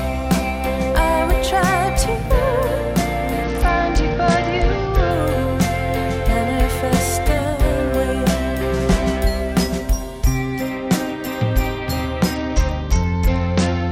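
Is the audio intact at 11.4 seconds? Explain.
Yes, the audio is intact at 11.4 seconds, with no dropout, click, distortion or other fault to be heard at that moment.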